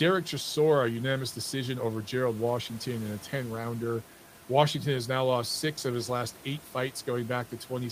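Nothing stood out on listening to this speech, with only the room's own background noise sitting about 24 dB beneath it.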